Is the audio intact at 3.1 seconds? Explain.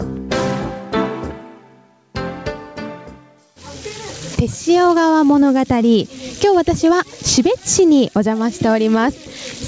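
No. At 3.1 seconds, as across the whole clip, there is gain pumping: the input gain is likely set far too high, so a fast limiter clamps down on each loud sound. The gain swings by around 15 dB, flattening the dynamics.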